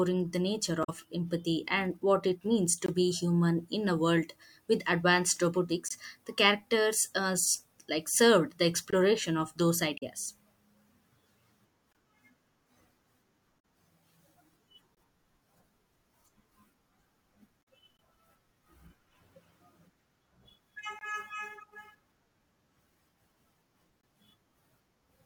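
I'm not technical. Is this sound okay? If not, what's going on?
No. There are two problems in this speech recording.

The first is damaged data in a compressed stream. Part of the stored file was corrupted, so the player briefly misreads it and you hear a short chirp or blip. This happens at 0.83–0.89 s (between "the nature" and "empathy and what it"), 9.97–10.03 s, 13.56–13.59 s and 17.59–17.62 s.

The second is a gap between chunks. The audio was handled in 3-second pieces, and a silent hole of about 21 ms sits at each join, at 2.86 s (after "and what it means"), 5.88, 8.91, 11.93, 14.95, 17.97, 20.99 and 24.01 s. No speech is lost.

To tell them apart, the gaps are clean silences at a steady rhythm, while the damaged spots come at irregular times.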